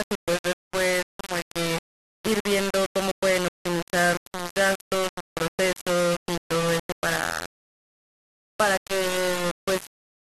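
From start to finish the speech carries heavy low bit depth without dither, most likely from rounding to about 3 bits with no added noise. The error tracks the voice, so syllables sound coarse and buzzy, with distortion only a few decibels below the signal, and quiet tails sputter or snap to silence. A waveform shows a few stair-stepped levels. A spectrogram shows broadband hash that appears only while sound is present.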